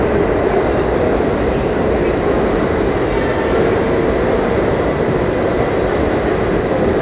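No technical faults are audible anywhere in the recording.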